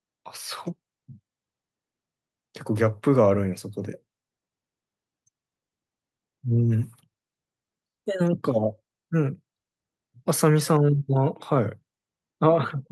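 No technical faults occur at any point in the speech, so there is nothing to describe in time order.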